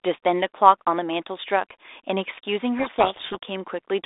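A codec payload misread runs from 2.78 to 3.43 s. The G.726 code words arrive with their bit order reversed, so the decoder rebuilds garbage and buries the speech in harsh distortion.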